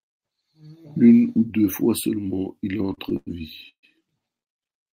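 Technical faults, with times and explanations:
2.77–3.29 s, repeated stalls (stutter), right after "deux fois seulement il": five short gaps, the longest 102 ms, stretch 173 ms of continued sound across about a third of this span. Packets arrived too late, draining the jitter buffer repeatedly, so speech drags without losing anything.
3.69–3.85 s, call audio freeze: the last sound is carried on for 142 ms, fading into about 90 ms of silence, then speech resumes where it stopped, now 142 ms late. Likely cause: packets held up in transit emptied the jitter buffer.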